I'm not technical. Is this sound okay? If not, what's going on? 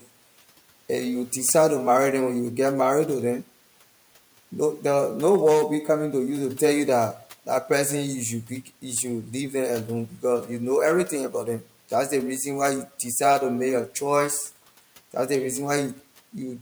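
No. This is speech cut by the noise suppressor: it mistook brief bits of speech for background noise and turned them down, so they sound swallowed. It happens at 8.49–8.84 s, at 10.08–10.24 s just before "you know everything", and at 11.3–11.63 s just before "that’s the reason why".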